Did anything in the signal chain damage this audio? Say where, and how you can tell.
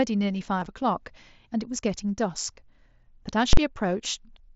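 Yes. Concealed Bluetooth headset packet loss on the wireless link at 0.60 to 0.66 s: about 37.5 ms of audio went missing across that 60 ms span, the longest gap 22.5 ms. The receiver filled each gap by repeating a matching recent stretch, leaving a brief buzzy, held tone.

Invalid numbers at full scale in the processing or sample-format stage at 3.53 to 3.57 s: a calculation produced invalid values that were forced to the maximum level. The block is only about 43 ms, which fits a 2048-sample block, so it lands as one sharp, very loud bang.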